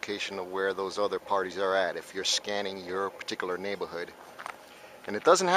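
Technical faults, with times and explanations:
No technical faults can be heard anywhere in this audio. There is nothing here to time or explain.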